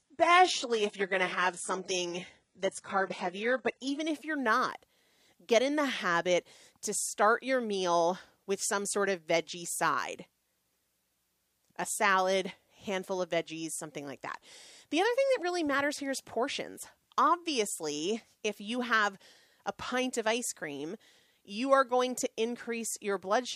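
For the first 4.0 s the speech sounds thin and smeared, with nothing above 11.1 kHz, a synthetic, hissy sheen in the upper range, and stronger codec artefacts. At 4.0 s it turns abruptly clearer and fuller, with no break in the sound. This is an adaptive stream starting at a low bitrate. The player opened on a very lean encoding, consistent with HE-AAC at 12 kbit/s, then switched up to what fits AAC-LC at 96 kbit/s once it had gauged the connection.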